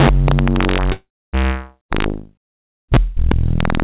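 From the very start, these everyday sounds carry integer overflow: the loudest moments overshoot the integer limit by about 3 dB and wrap to the opposite sign instead of being limited. Only around one percent of samples go over, so you hear sharp cracks on the peaks rather than a constant tearing buzz.

At 0.92 s there's a call audio freeze lasting until about 1.35 s. The likely cause is packets arriving late and the jitter buffer running dry. The receiver stretches the last bit of sound into a fading buzz or hiss, and about 270 ms of that is silent. When the packets show up, playback picks up exactly where it left off, so nothing is lost, but everything after is pushed about 409 ms later. The audio passed through a G.711 mu-law call path, which is why there's nothing above 4 kHz.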